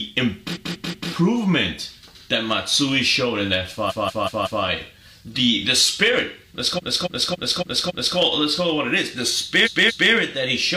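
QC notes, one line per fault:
0.51–1.07 s, 3.86–4.60 s, 6.74–8.13 s, 9.62–10.08 s: repeated frames. A block of compressed audio was resent and decoded again, so slices of 0.19, 0.19, 0.28 and 0.23 s replay 3, 4, 5 and 2 extra times. Each replay is a stutter, and they add 0.56, 0.74, 1.39 and 0.46 s, 3.16 s in all.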